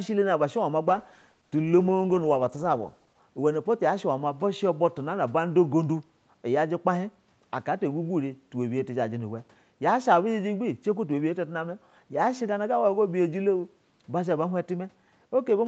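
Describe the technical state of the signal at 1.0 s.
At 1.0 s the speech is inside a call bitrate drop running from 0.89 to 3.27 s. The call's bandwidth estimate fell, so Opus coded far more coarsely, which fits a cut from about 40 to 12 kbps, leaving the sound rough and watery.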